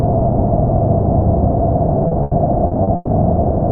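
From 2.07 to 3.10 s the audio suffers repeated packet loss, heard as a choppy stretch with pieces missing. Five holes open in quick succession, the longest 120 ms, and each is patched by stretching out the last sound received, so about 320 ms, 31% of that span, is concealment. On a spectrogram the patches appear as smeared, repeated bands, and the waveform shows short, looped-looking sections between the surviving audio.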